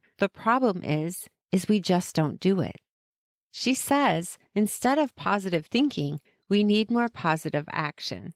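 Just after "just don't do it", from 3.35 to 4.15 s, a jitter buffer slow-down stretches the audio. The receiver's buffer was running low or had just raised its target delay, so it repeated single pitch periods and fragments of pauses, adding about 79 ms and slowing playback to roughly 91 percent speed. Syllables sound drawn out, but the pitch stays put. That unchanged pitch is what separates it from a clock or tape-speed error, which would lower the pitch as it slowed.

Overlapping that, from 3.74 to 7.30 s, a call bitrate drop makes the sound coarse, watery and duller in the top end for about 3.45 s before it clears. The congestion estimate fell, and the encoder was pushed to a much lower rate. The sound points to a drop from around 32 kbps to about 16 kbps, where Opus both quantises coarsely and trims high frequencies. Unlike packet loss, a bitrate drop does not make the audio break up or drop out. 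The degradation is continuous and steady until the rate recovers.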